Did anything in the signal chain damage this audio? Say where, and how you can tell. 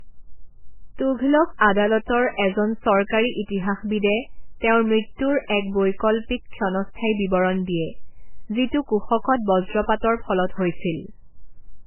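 Yes, at the codec stage: this speech has nothing above 3 kHz throughout, likely low-bitrate audio saved at a high bitrate, so the second encode can't restore what the first MP3 stripped.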